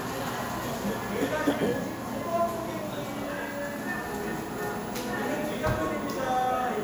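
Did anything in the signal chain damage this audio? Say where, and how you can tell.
No, nothing in the chain damaged these sounds.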